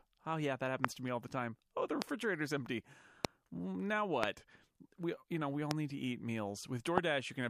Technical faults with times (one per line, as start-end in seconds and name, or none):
0.84-0.87 loud pop
2.02-2.04 loud pop
3.25-3.27 loud pop
4.23-4.25 loud pop
5.71-5.73 loud pop
6.98-7.00 loud pop